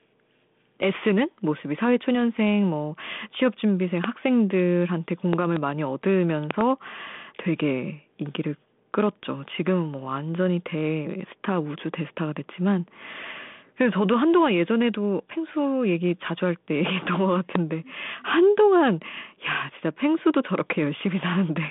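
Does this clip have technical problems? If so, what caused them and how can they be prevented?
Yes. Loud pops break through the speech at 4.04 to 4.06 s, 5.33 to 5.59 s, 6.51 to 6.63 s and 17.55 to 17.58 s. The middle two are double pops in quick succession. Each peaks at about 15 dB above the speech, which carries on underneath. The likely cause is a sudden voltage step or pulse, from a plug, switch, static discharge or driver glitch, entering the chain. The circuits after it shape the pulse into a sharp thump. The band-limited telephone character comes from the 32 kbit/s G.726 path, with nothing above 3.8 kHz, and is not part of these faults. To prevent the pops, secure cables and connectors, avoid switching or touching equipment while recording, and keep grounding and drivers stable.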